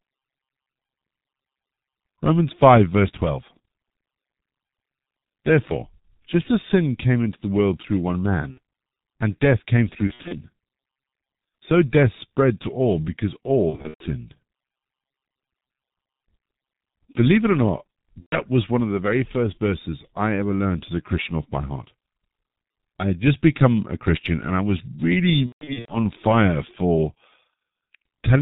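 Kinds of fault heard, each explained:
G.723.1 codec: The whole recording passed through a very low-rate telephony codec, about 6.3 kbit/s in 30 ms frames. With nothing above 4 kHz and a slowly updated voice model, the speech is heavily muffled and hoarse, and consonants smear together.
VoIP packet loss concealed by the speech codec: Packets went missing five times, at 8.51, 10.07, 13.70, 18.20 and 25.47 s. The decoder each time filled the gap by extending its last voice model, so the speech turns into a buzzy tone or coloured noise and fades, recovering only gradually.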